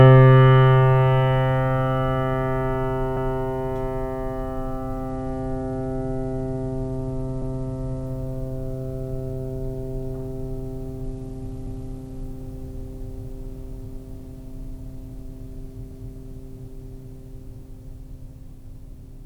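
At 3.17 s the music stutters as a 250 ms fragment plays twice. These are overlapping chunks: each 4 s block begins before the previous one ends, so the join repeats material. The same stutter recurs at 7.42, 11.67 and 15.92 s.

From 5.09 to 8.06 s, and again from 11.03 to 12.23 s, the treble dulls and gritty noise rises. This is a Bluetooth SBC bit pool drop. The sound fits a bit pool falling from 31 to 14, near 99 kbps, starving the upper sub-bands and coarsening the rest.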